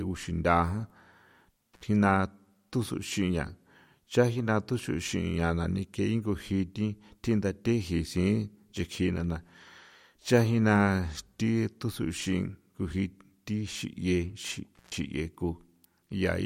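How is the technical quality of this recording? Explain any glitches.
The speech has two dropouts from an intermittent contact, at 1.74–1.83 s and 14.75–14.95 s. A loose plug or cable briefly loses connection, so the signal cuts out for about 58 ms and then about 129 ms, with crackle at each edge and faint hiss in the gap.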